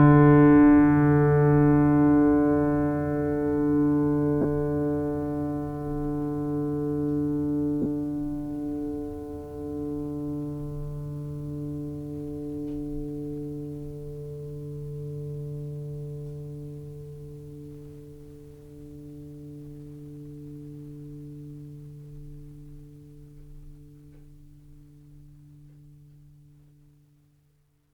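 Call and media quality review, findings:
Lost LE Audio frames in the music at 4.41–4.45 s and 7.82–7.86 s, gaps of about 30 ms and 37.5 ms, consistent with 7.5 ms LC3 frames. The decoder's concealment refills the gap with the last spectrum at randomised signs, so it sounds like a brief noisy smear, not a silent dropout or hard click.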